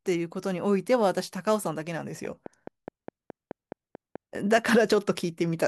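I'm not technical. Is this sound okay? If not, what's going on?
No. From 2.25 to 4.59 s there's a steady ticking over the speech, roughly ten sharp clicks at about 4.7 per second, louder than the voice itself. This is a train of clicks, likely from electrical interference or a faulty connection or power supply.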